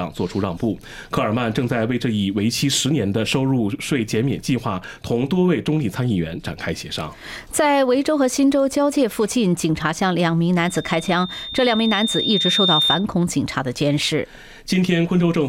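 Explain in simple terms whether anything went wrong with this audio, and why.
Loudspeaker feedback squeal, 10.63 to 13.06 s: the microphone re-hears its speaker, so one 3.6 kHz tone swells over about two seconds, not a steady whistle.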